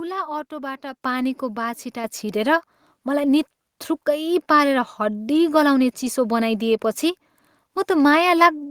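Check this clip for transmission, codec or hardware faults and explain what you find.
Two microphone volume steps were found, at 1.02 s and 2.04 s, rising by about 8 dB and then about 5 dB. The call software raised the input level abruptly, so speech and background noise both jump louder together. On a waveform the envelope steps upward, and on a spectrogram every band brightens at once.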